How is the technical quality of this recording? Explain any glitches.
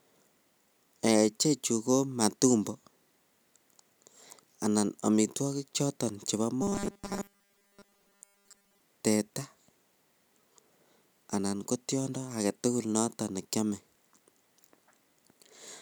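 There's one clear glitch. From 6.62 to 8.80 s, right after "anan amitwokik choton chebo", the speech turns into robotic sound from repeated short buffers: a rigid metallic buzz at 200 Hz. It's likely a starved buffer looping about 5 ms of audio for most of that stretch while real audio gets skipped.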